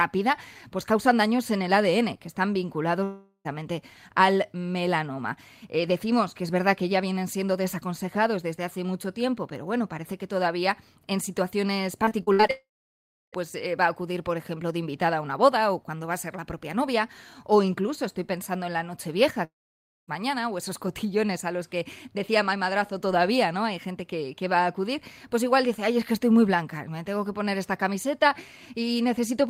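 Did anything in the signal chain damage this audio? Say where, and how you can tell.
Yes. Three long network dropouts: at 3.03 to 3.47 s, 12.51 to 13.35 s and 19.45 to 20.10 s, the sound smears into a fading buzz, then goes silent for about 0.07, 0.67 and 0.57 s before resuming with the missing stretch simply gone. It's likely a network stall at the receiver.

Just before the middle dropout, 12.05 to 12.51 s has repeated packet loss, with a choppy, robotic texture. There are six short holes, the longest 62 ms, and about 39% of that span is concealed by repeating the previous sound, so it's network again.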